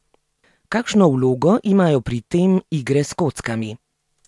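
No technical faults can be heard.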